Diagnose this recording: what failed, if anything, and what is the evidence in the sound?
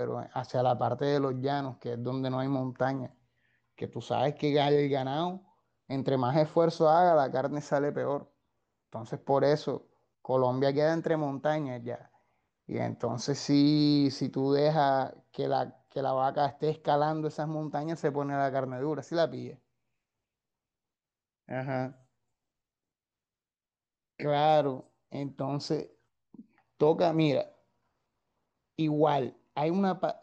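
Nothing failed: no stage of the chain leaves an audible defect anywhere in the speech recording, so there is no fault evidence to cite.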